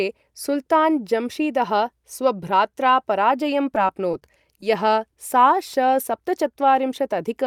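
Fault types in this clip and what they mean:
Scattered short gaps: between 3.75 and 4.63 s, after "सुल्तान् जम्शीदः स्वभ्रात्रा पराजयं", about seven brief packet losses of at most roughly 15 ms are filled by continuing the previous sound, leaving ticks and smears. The waveform shows repeated slivers, and the spectrogram shows thin vertical seams.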